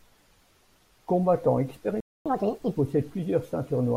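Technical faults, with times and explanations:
2.00 to 2.26 s, playback stall: the speech drops to silence mid-flow for about a quarter of a second (253 ms), then picks up where it stopped. The likely cause is the player running out of buffered data or its output thread being blocked.
2.26 to 2.76 s, catch-up at higher speed: right after the gap the speech rushes and sounds squeaky, at 1.5 times normal speed and roughly seven semitones high, then drops back to normal. The player is resampling its backlog faster to win back the lost time.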